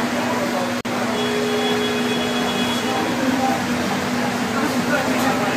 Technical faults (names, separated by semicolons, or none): gap at a join of encoded pieces; audio missing between chunks